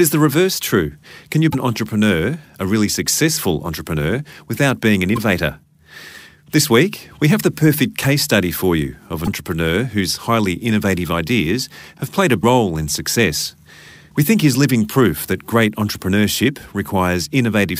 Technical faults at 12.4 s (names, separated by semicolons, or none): damaged data in a compressed stream